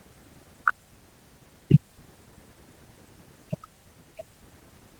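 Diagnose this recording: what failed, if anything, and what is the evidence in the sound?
Nothing failed: the recording contains no audible fault.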